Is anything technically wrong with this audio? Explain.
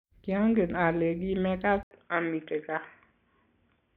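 Yes. From 1.83 s to the end, after an 80 ms silence, the speech turns dull and boxy, with nothing above 3.5 kHz, and a faint new noise floor about 50 dB down. Loudness barely changes. The likely cause is an input switched to a poorer, narrower-band device.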